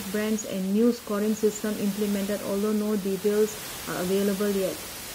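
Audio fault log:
No faults heard in this speech recording.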